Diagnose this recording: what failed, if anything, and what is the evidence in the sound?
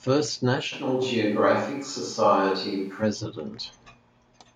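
At 0.74 s the sound turns abruptly roomy and hollow, with thinner bass and a room-noise floor about 35 dB below the speech, though the level barely changes. It snaps back at 3.01 s. This is likely a switch to a distant microphone at the capture stage. The sudden change at both ends distinguishes it from added reverb or EQ, which would not switch on and off like that.

At 1.02 s, voice and background jump together by 4 dB in a single step, with no change in tone. This points to call processing: the microphone volume was stepped up by automatic gain. Unlike the distant-microphone switch, the room character stays the same and only the level rises.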